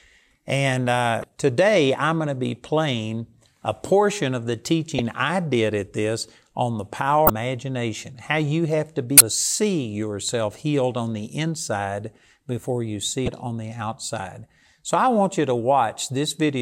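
Damaged data in the compressed stream makes the decoder lose frame sync and hunt for the next header, leaving brief glitches in the speech at 1.20, 4.98, 7.27, 9.17 and 13.25 s.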